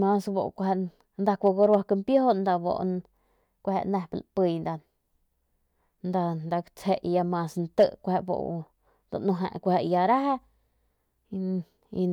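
At 1.46 to 1.75 s the speech hits hard clipping: the signal runs about 2 dB past what a stage in the chain can pass, so the peaks are sheared flat. Those squared tops throw energy into high harmonics, heard as a brief crackly roughness on the loudest syllables. A shorter burst follows at 7.79 to 7.84 s, about 3 dB over, giving crackle on that peak.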